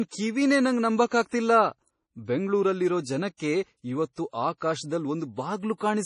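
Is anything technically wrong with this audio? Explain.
Yes. Throughout the speech, heavy MP3 compression is the likely cause: a starved bit budget, consistent with roughly 32 kbps, removes everything above 10.5 kHz and leaves a watery, swirling texture.

Pre-echo appears at 1.09 s and 1.27 s, just after "ಕಿವಿನೇ ನಂಗ್", then at 3.36 s and 4.13 s. Block-spread quantisation noise leaks ahead of attacks as a 25 to 55 ms hiss, softening each onset.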